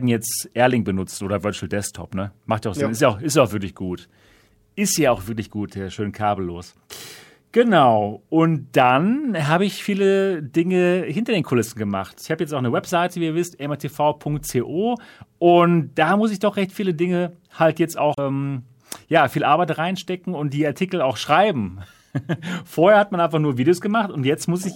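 At 18.15 to 18.19 s, between "halt jetzt" and "ähm ja viel", damaged data in the compressed stream makes the decoder misread frames and lose sync, giving a brief glitch. A spectrogram shows a short break in the speech harmonics, and the waveform shows an abrupt discontinuity.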